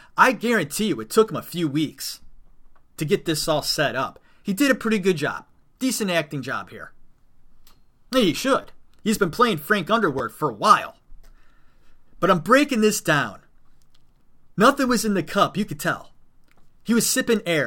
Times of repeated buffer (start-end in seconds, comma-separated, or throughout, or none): 8.62-8.64, 10.19